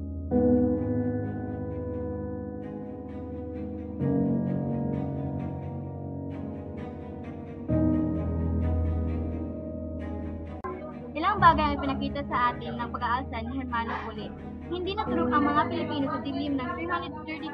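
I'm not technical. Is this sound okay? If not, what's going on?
Yes, nothing in this recording points to a technical fault, so there's nothing here to fix.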